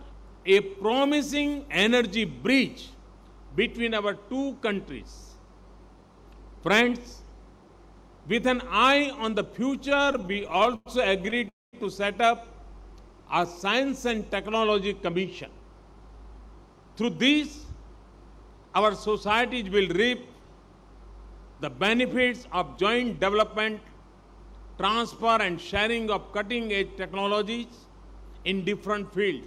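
Between 9.85 and 10.88 s packets kept reaching the receiver late, so its jitter buffer ran dry 20 times. Each time it stretched the last sound to cover the wait, filling 284 ms in all, or 28% of that stretch, with the longest wait 100 ms. Nothing is lost, but the audio drags and stutters in repeated stalls. A second, shorter burst follows from 11.26 to 11.49 s, with 5 gaps totalling 50 ms and none longer than 14 ms.

Right after, from 11.49 to 11.75 s, comes a call audio freeze. The likely cause is packets held up long enough to empty the buffer outright. The receiver carries the last sound on and lets it fade, and 200 ms of the 241 ms fill is silence. The audio then resumes where it stopped, so the delay grows by 241 ms and nothing is missing.

The receiver then works that extra delay off with jitter buffer speed-up, cutting short pitch-period pieces out of the audio many times in a row. 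From 15.46 to 18.58 s playback runs at 104% speed with about 150 ms removed, and pitch is unchanged. From 21.95 to 23.68 s it runs at 106% with about 100 ms removed, which is fast enough to sound hurried.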